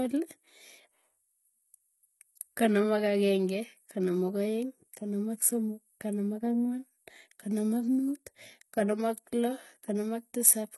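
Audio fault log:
throughout HE-AAC compression: likely low-bitrate coding near 16 kbps; copied treble makes s sounds gritty, spectrogram shows repeated high bands, empty above 11.8 kHz.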